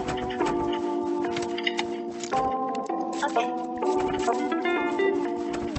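From 1.85 s to the end of the clip, the sound abruptly rushes ahead at about 1.74 times its earlier pace while its pitch stays put, giving a rushed quality. This points to a time-stretched section: software likely squeezed that stretch to fit a shorter length, holding pitch by dropping short slices of audio. The top end stays capped near 8 kHz throughout, consistent with the Opus call path it passed through.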